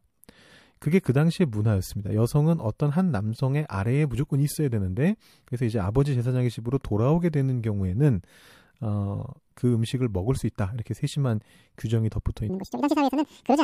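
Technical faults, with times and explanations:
12.50–13.64 s, section at the wrong speed: this stretch was likely played against the wrong clock at 1.92 times speed, so the speech turns hurried and rises roughly ten semitones.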